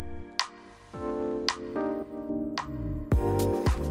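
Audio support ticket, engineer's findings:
Pre-emphasis left on, 0.00 to 2.29 s. Treble boost applied upstream, matching de-emphasis not applied on playback. Shape consistent with a J.17 curve. Top end about 11 dB hot at 10 kHz relative to 1 kHz. Result: thin, bright, sibilant sound, spectrum tilted hard upward.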